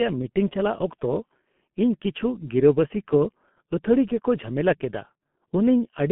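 Speech throughout shows heavy G.723.1 codec damage: nothing above 3.8 kHz, plus a hoarse, smeared quality that plain band-limiting lacks, which fits a 6.3 kbit/s stream.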